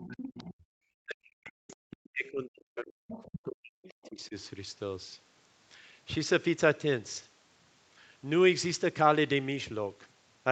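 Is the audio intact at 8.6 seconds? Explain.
Yes, the speech at 8.6 seconds is intact, with no fault at that moment.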